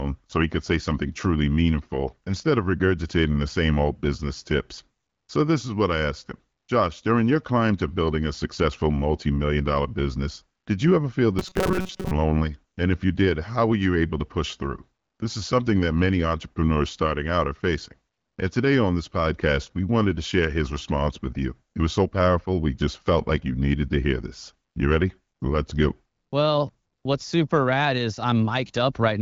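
From 11.39 to 12.14 s the speech hardens into a rigid, metallic buzz pitched near 188 Hz that only loosely follows the talker. This is robotic sound from repeated short buffers. Audio likely arrived too seldom, so a fragment of about 5.3 ms was looped, and roughly half the real signal was lost.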